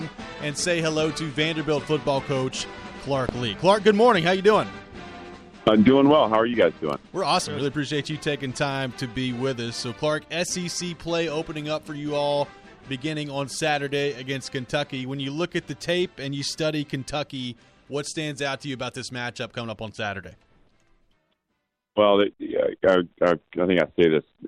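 No technical faults are audible.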